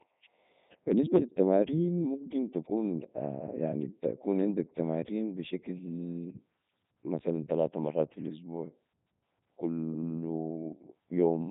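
Throughout, Codec 2 vocoder damage: the speech is resynthesised from sine waves, sounding buzzy and robotic, not smeared like a waveform codec, with nothing above 3.8 kHz, consistent with 3.2 kbit/s.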